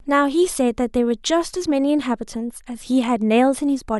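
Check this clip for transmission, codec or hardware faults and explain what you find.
No transmission, codec or hardware fault can be heard anywhere in the speech, and the signal stays continuous and stable throughout.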